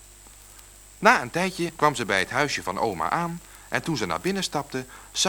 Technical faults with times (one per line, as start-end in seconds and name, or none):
none